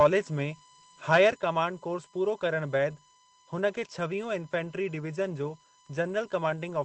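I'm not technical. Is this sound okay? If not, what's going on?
No, there are four problems in this speech recording.

USB whine runs through the entire clip. It is a thin, steady, high-pitched tone built on a 1 kHz pitch, with its strongest part up around 9 kHz. It comes from the USB connection: the computer's USB port draws power in regular pulses a thousand times a second, and that rhythm leaks into the microphone's power or ground wiring, where it is recorded as a constant tone sitting underneath the speech.

DC offset is also present from start to finish. The whole recorded waveform sits slightly off its centre line instead of swinging evenly above and below it. You cannot hear this directly. It takes up some of the room the recording has before it distorts, and it leaves a steady, inaudible rumble at the very bottom of the frequency range.

Microphone overload happens from 1.12 to 1.29 s, just before "कमांड कोर्स पूरो". 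The speech there was louder than the recording could hold, so the tops of the loudest peaks are flattened off. That gives a harsh, crackly edge to that moment. The likely cause is that the microphone's input volume was set too high.

Microphone volume stepped down occurs at 1.32 s, also just before "कमांड कोर्स पूरो". Both the speech and the background become quieter all at once, rather than fading gradually. Coming straight after the distorted moment, this is likely the calling software detecting the overload and lowering the microphone's input volume in a single step to stop it from happening again.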